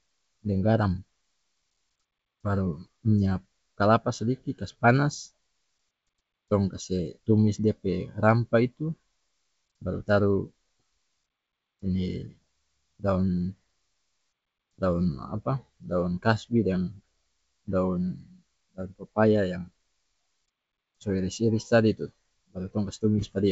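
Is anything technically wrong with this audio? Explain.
No, nothing in this speech clip sounds technically wrong. It carries the band-limited sound of G.722 wideband telephone coding at 64 kbit/s, with nothing above about 7.7 kHz and at most a faint trace of coding damage.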